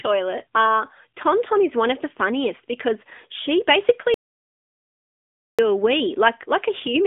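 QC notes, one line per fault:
Throughout: AMR narrowband mobile codec. The speech is squeezed into a line band of roughly 150 Hz to 3.6 kHz, with nothing above 3.7 kHz. The bitrate, consistent with 10.2 kbps, leaves plainly audible buzzy, synthetic coding damage. A spectrogram shows a hard ceiling near 3.7 kHz across the whole clip.
4.14–5.59 s: audio dropout to silence. Just after "funniest because she basically" the sound cuts out for about 1.44 s and resumes mid-flow. The gap is silent with no room tone, likely from input lost while silence was still recorded. It shows as a flat waveform and an empty spectrogram.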